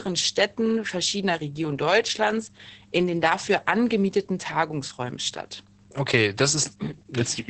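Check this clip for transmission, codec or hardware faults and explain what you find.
One codec fault runs through the whole clip: Opus voice compression at a low rate. The encoder is working in its SILK linear-prediction mode at wideband, so nothing survives above about 8.4 kHz, and the excitation is coded coarsely, which fits a bitrate around 10 kbps. The damage is heavy. The speech sounds muffled and dull at the top, with a hoarse, slightly robotic roughness in the voiced parts where the prediction residual has been starved of bits.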